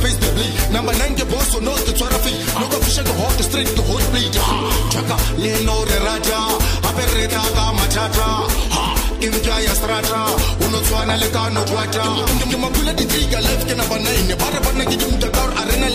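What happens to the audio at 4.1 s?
Nothing goes wrong at 4.1 s; the audio passes through that moment intact, with no dropout, click or distortion.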